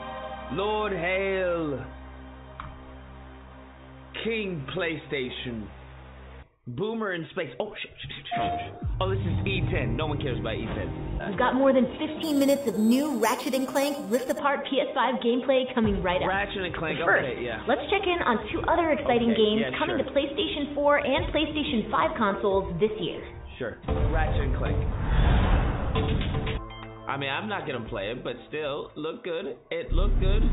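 From 12.23 to 14.39 s, the rate was raised by repeating each sample with no smoothing filter, which points to an 8 kHz source raised to 48 kHz: imaging from sample-and-hold upsampling. Mirrored copies fill 4 to 8 kHz, about 17 dB down, as a metallic fizz tracking the sound.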